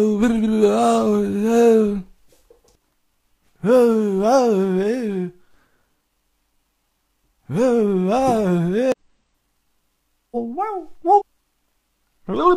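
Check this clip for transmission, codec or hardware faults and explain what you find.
The clip has one fault type, occurring three times. Damaged data in a compressed stream at 8.92–8.98 s, 10.31–10.37 s and 11.15–11.22 s: corrupted bytes make the decoder misread frames and resynchronise, giving short glitches such as chirps, squawks, clicks or brief holes.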